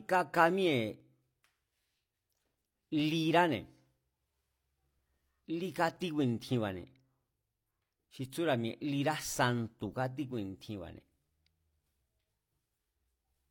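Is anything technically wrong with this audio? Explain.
Yes. There is overlap between stream segments at 1.00–1.04 s, 3.00–3.03 s and 5.97–6.00 s. Segment time stamps overlap, so the player trims about 40 ms of real speech. Each jump is a click or tiny skip.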